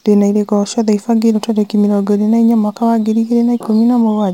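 Crude rate conversion runs from 1.16 to 4.02 s. Samples are simply repeated to fill the new rate, with no filtering, which fits a 44.1 kHz to 48 kHz step. The resulting error, roughly 35 dB below the speech, is a gritty, inharmonic fizz that clings to louder, brighter sounds.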